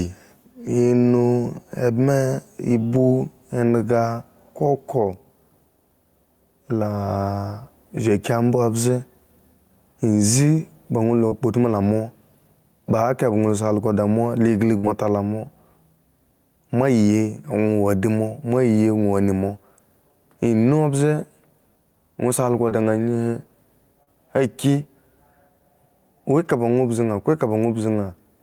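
Gain pumping runs through the whole recording: the gain swings by around 10 dB, pulled down under each loud sound, flattening the level. This is likely a microphone gain set far too high, with a fast limiter clamping every peak.

Short concealed packet loss occurs at 11.27–11.33 s, 22.69–22.73 s and 24.03–24.09 s. Audio arrived too late, and the receiver filled roughly 36, 18 and 38 ms by extending the preceding sound, leaving brief smears or wobbles before blending back.

A burst of packet loss hits at 14.77–14.85 s. About 60 ms of consecutive audio went missing, and the receiver held and faded the last sound for about 61 ms, giving a fading buzz or hiss before the speech resumes with that stretch gone.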